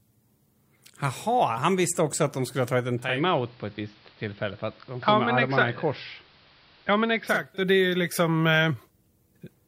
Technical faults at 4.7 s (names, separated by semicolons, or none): digital radio blending to analogue